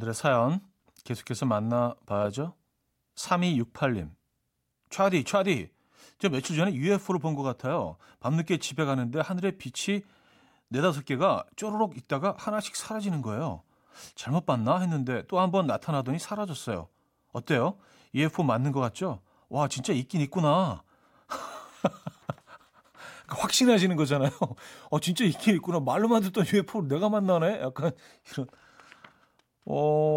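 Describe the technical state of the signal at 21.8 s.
At 21.8 s the speech comes through intact, with no audible fault.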